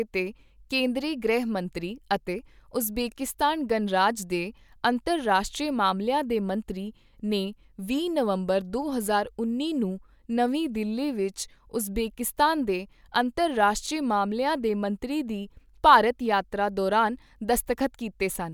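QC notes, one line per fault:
Nothing to log on this one, as no faults turned up anywhere in the speech.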